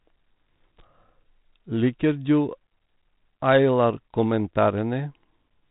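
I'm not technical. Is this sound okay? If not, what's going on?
Yes, nothing is going wrong in this speech recording. It has gone through the kind of digital phone coding cordless phones use, G.726 ADPCM, so it has the narrow, phone-like sound of having nothing above about 3.9 kHz, with only a faint trace of that coding.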